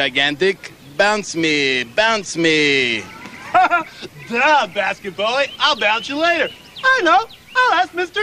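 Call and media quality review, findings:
Nothing stood out on listening through this recording.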